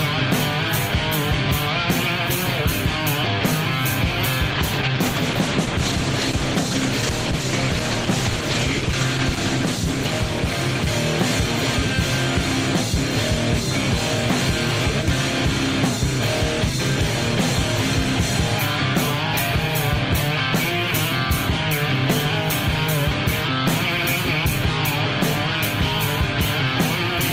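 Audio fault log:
4.52–11.93 s, call bitrate drop: the sound turns rough and watery, with coarser, smeared detail, and it is at its poorest for about 5.1 s within that span before clearing. The call's bandwidth estimate fell, so the encoder was given far fewer bits and had to code the audio more crudely. The change in quality points to a drop from around 32 kbps to roughly 13 kbps, followed by a recovery.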